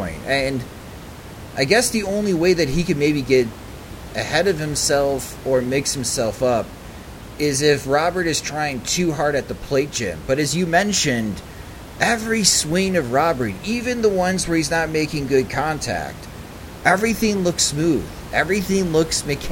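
No technical faults can be heard in the speech, with the room's background noise sitting about 16 dB beneath it as part of the recording itself.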